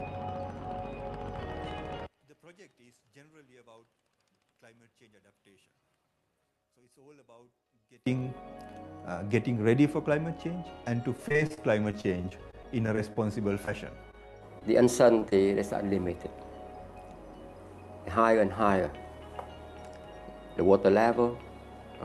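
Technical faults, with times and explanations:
2.06 to 8.06 s, one channel inverted: One stereo channel likely has reversed polarity, so whatever the two sides share cancels when they are summed to mono. The level drops by about 33 dB, centred content and bass nearly disappear, and only a faint residue of the channel difference remains.
11.17 to 13.17 s, repeated packet loss (robotic sound): Packets kept going missing or arriving late across this two-second stretch. Each gap, the longest about 32 ms, was patched by extending the preceding sound, so roughly 15% of the stretch is synthetic. The audio turns choppy, with pieces missing.
13.65 to 13.69 s, 14.59 to 14.63 s, 15.19 to 15.23 s and 15.29 to 15.33 s, short concealed packet loss: About 20 ms of audio never reached the decoder each time. The receiver continued the previous sound across the hole and blended back in, leaving brief smears or wobbles where a short sound may vanish.
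14.11 to 14.15 s, short stall from a late packet: A packet arrived about 16 ms late and the jitter buffer ran dry. The receiver stretched the last sound until the packet arrived, then resumed where it left off. Nothing is lost, but one moment is held slightly too long, with a slight buzz or dip.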